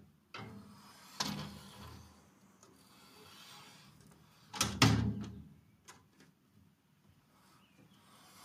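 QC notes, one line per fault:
No faults detected in this recording of sounds.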